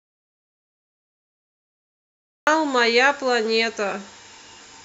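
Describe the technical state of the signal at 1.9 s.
At 1.9 s the clip is silent, with no room tone at all. This is an audio dropout to silence that is already under way when the clip begins and runs until 2.47 s, where the speech cuts in abruptly. The likely cause is a lost input, such as a disconnected device or stray mute, while silence kept being written.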